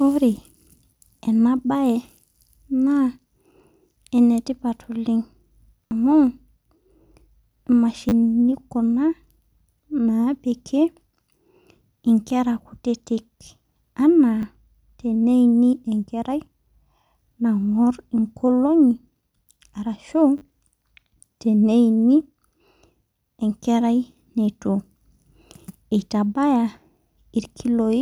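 At four points the playback device ran short of new audio and replayed its last buffer instead, a repeated buffer fault. Each repeated piece is very short, which fits a 10 ms buffer, so rather than an audible stutter the speech breaks into a brief buzz with hard joins: at 5.87 to 5.91 s, 8.09 to 8.12 s, and 20.38 to 20.41 s. At 14.42 s there is a single click. Between about 10 and 40 ms of speech drop out at each.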